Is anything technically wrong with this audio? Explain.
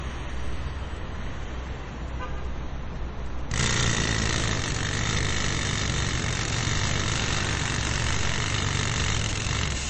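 Yes. Throughout the clip the audio carries plainly audible MP3 compression, likely from encoding at a low bitrate, with damage that fits roughly 32 kbps. Short of bits, the encoder has cut the treble at a fixed point, leaving nothing above 8.3 kHz, and it drops weak frequency lines that then flicker on and off from frame to frame. The result is dull, muffled sound with a watery, swirling texture and smeared attacks.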